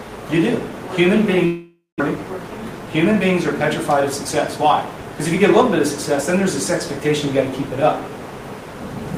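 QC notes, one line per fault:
1.45 to 2.02 s, long network dropout: sound likely stopped arriving, so it turns to a fading buzz, then silence, resuming with about 0.4 s missing.
2.16 to 3.37 s, jitter buffer speed-up: playback runs 110% fast at unchanged pitch, trimming roughly 150 ms of backlog in many tiny cuts, so it sounds hurried.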